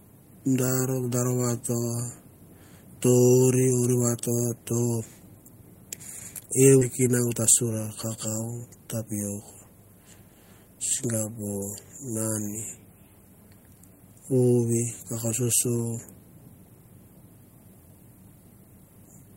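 At 6.81 s the speech skips ahead. Roughly four tenths of a second is dropped, and the two sides join directly with no gap. Jitter buffer speed-up follows, from 7.07 to 7.77 s and from 8.17 to 9.65 s. Short pitch-period pieces are cut repeatedly, so speech runs about 7 to 8 percent faster, hurried but unchanged in pitch.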